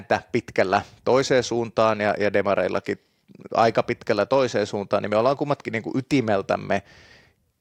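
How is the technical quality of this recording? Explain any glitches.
The technical quality of this recording is sound, with no glitches to explain.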